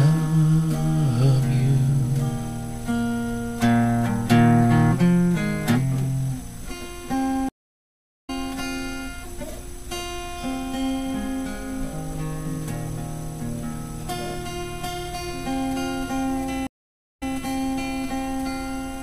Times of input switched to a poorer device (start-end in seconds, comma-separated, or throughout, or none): none